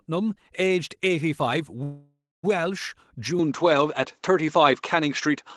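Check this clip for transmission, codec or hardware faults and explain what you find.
Two faults are audible in this speech clip: a call audio freeze and an input switched to a poorer device.

From 1.83 to 2.45 s, the call audio freeze stretches the last sound into a fading buzz, then 240 ms of silence. Packets were likely held up and the jitter buffer ran dry. Speech resumes where it stopped, 0.6 s late. A spectrogram shows smeared flat bands thinning to blank.

At 3.39 s, with no silence at the switch, the sound turns duller and shifts by about 5 dB, likely from an input switched to a poorer device. It stays that way to the end. A spectrogram shows a hard ceiling at 7.6 kHz, with a faint new noise floor roughly 50 dB down.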